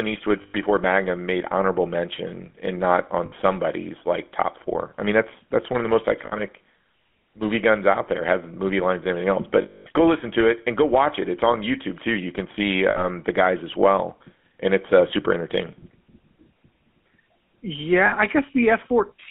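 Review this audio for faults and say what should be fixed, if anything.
The speech has a buzzy, gravelly roughness from start to finish, plainly audible, with a thin telephone band running from about 200 Hz to 3.4 kHz. This is the GSM full-rate codec, consistent with its 13 kbps mode. It rebuilds the sound from a vocal-tract model driven by a coarse, regularly spaced pulse excitation, so fine detail becomes a grainy buzz. To prevent it, capture or route the audio over a wideband path instead of a GSM full-rate link.

Six brief spots turn into a rough, metallic ring where the sound freezes. They fall at 0.42–0.55 s, at 3.26–3.33 s just after "mention and not on", at 6.26–6.35 s, at 9.62–9.87 s between "lines and everything else" and "go listen to it", at 12.90–13.05 s between "can see" and "the guys as well", and at 18.06–18.15 s. These are lost GSM frames. The decoder fills each gap by repeating the last good frame. 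The 9.62 s loss is the longest, at 240 ms. To prevent it, improve the radio or network link, or add error protection and retransmission so frames arrive intact.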